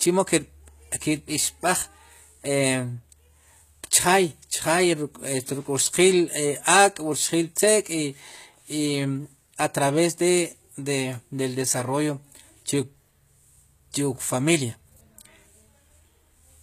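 HE-AAC compression, likely, runs throughout this speech: treble is rebuilt from copied lower bands and ends near 14.9 kHz, leaving s sounds gritty and metallic, as a low bitrate near 20 kbps would.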